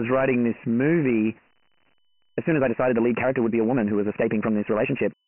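From the start, the speech carries Dialogic VOX ADPCM coding. The encoder stores each sample as a 4-bit step relative to a prediction, and the quantisation error lands as a gritty hiss that follows the speech, heavy in this clip. Nothing remains above 3 kHz, which points to a 6,000-samples-a-second VOX file at about 24 kbps, and the telephone line band of 150 Hz to 3.7 kHz further thins the lows.

At 1.94 s, the pace jumps abruptly and stays fast through to the end while pitch holds steady. This is a time-stretched section, in this case a squeeze to about 1.66 times normal speed, likely done by software that drops short pieces of audio to shorten the passage without shifting pitch. The removed fragments leave the delivery rushed.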